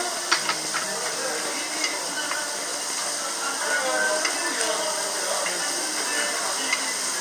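From 0.01 s to 4.05 s a train of clicks runs over the sound: some thirty near-identical pops at a steady 6.2 per second, heard as a regular ticking that carries through quieter moments too. Each click peaks around 10 dB above the surrounding audio. The likely cause is a repeating electrical pulse, such as interference from nearby equipment or a faltering interface. A waveform shows evenly spaced narrow spikes; a spectrogram shows thin vertical broadband lines at matching intervals.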